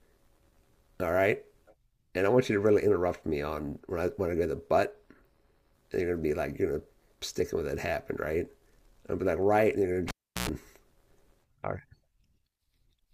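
A cable pulled and plugged in interrupts this speech clip between 10.08 and 10.49 s. A pop marks the lead coming out of a live connection, and the audio drops to near silence for about 0.36 s. As the plug goes back in, only its tip touches at first, so a 60 Hz mains buzz bursts through for about 0.11 s before a second pop as the full contact restores the sound.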